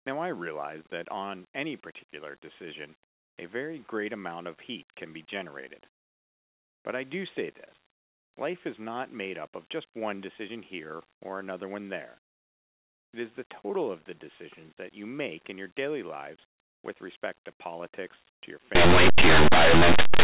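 A speech clip whose final stretch, from 18.75 s to 20.23 s, right after "to politics to your", collapses into very loud, harsh distortion. This is linear audio read as companded: plain 8-bit samples are being expanded as though they were mu-law codes. Samples sitting just to one side of zero are turned into the loudest possible outputs, while those just on the other side stay small. On a waveform the section jumps to dense, very large, lopsided excursions. On a spectrogram the speech structure vanishes under broadband noise filling the whole band.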